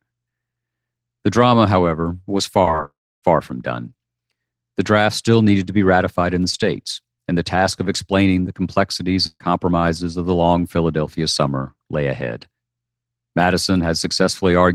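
Repeated packet loss (robotic sound) hits this speech recording from 2.62 to 2.79 s, just after "drama however was". Several brief holes, none longer than about 12 ms, are each patched by stretching the preceding sound, so roughly a quarter of that stretch is concealment and it turns choppy. A long network dropout follows from 2.85 to 3.23 s, before "far from done". The last sound is carried on as a fading buzz or hiss, then about 290 ms of near-silence follows. Some 380 ms of audio never plays, likely because the stream stopped arriving for that long. A burst of packet loss at 9.27 to 9.41 s, right after "of explaining the complexities", removes about 130 ms. The final sound before the gap is held and turned down, leaving about 40 ms of silence before the audio resumes further on.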